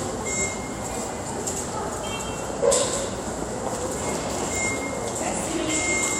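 No technical faults can be heard in this recording of sounds. Nothing in it points to a problem with how the audio was captured or played back.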